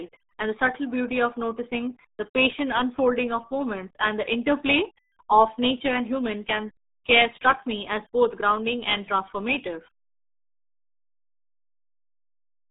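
From start to finish the speech runs through the RealAudio 14.4 codec, and it's heavily mangled. Nothing gets through above about 3.8 kHz, the band sits roughly between 200 Hz and 3.7 kHz, and the muffled, gargly texture fits an 8 kbit/s dial-up rate.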